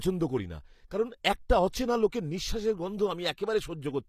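From start to finish the speech carries plainly audible damage, most likely HE-AAC compression at a low bitrate, something like 24 kbps. The treble is rebuilt from lower bands rather than coded, so s sounds come out gritty and metallic, with nothing above about 14.9 kHz.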